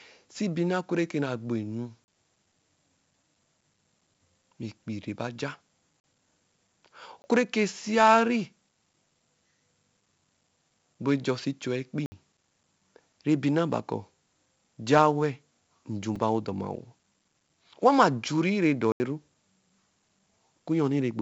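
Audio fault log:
throughout, 4-bit ADPCM compression: heavy gritty hiss rides on every loud stretch of speech, with roughness on sharp onsets and a dull top with nothing above 7.7 kHz. Each sample is coded as a coarse 4-bit step, which fits a 16 kHz, 64 kbps stream.
2.04–2.08, 6.00–6.04, 7.22–7.24, 12.06–12.12, 16.16, 18.92–19.00, block of digital silence: the audio cuts abruptly to nothing and returns. The gaps are a 4 ms tick at 16.16, holes of 20 to 80 ms elsewhere, and follow "gbo enu" and "rɛ ba ja". Silent blocks, likely from unfilled output buffers.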